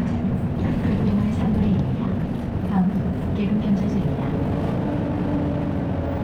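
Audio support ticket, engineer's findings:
Abrupt jump in pace at 2.04 s, running to the end at 6.24 s: sound turns rushed, pitch unchanged. Time-stretched section, sped up about 1.41x. Likely cause: stretching software fitting audio to a shorter length, dropping short slices to keep pitch, leaving hurried timing.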